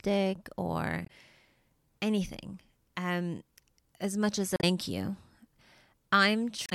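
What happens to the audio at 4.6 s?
Damaged data in a compressed stream, from 4.56 to 4.64 s, just after "um as much as": corrupted bytes throw the decoder out of sync, producing a brief garbled blip.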